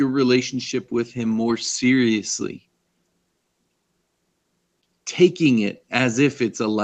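No technical faults are audible.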